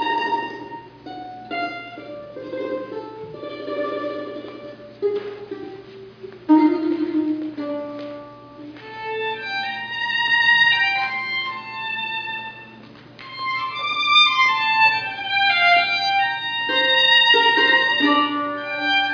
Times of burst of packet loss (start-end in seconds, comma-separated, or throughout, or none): none